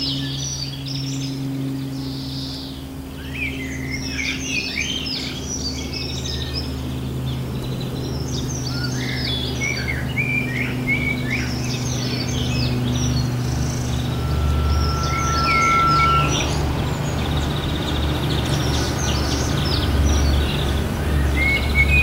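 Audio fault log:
14.08–16.53 s, loudspeaker feedback squeal: a 1.4 kHz tone swells over roughly a second and a half to about 5 dB above the sound, as the microphone re-amplifies its own loudspeaker.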